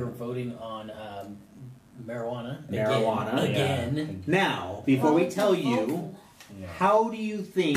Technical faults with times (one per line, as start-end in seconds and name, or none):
0.00-7.76 mains buzz